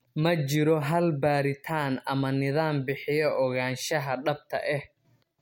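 No technical faults are audible.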